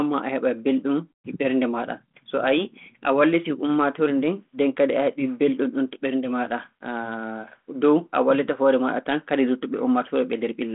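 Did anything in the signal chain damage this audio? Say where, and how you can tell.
No, nothing in the signal chain damaged this audio.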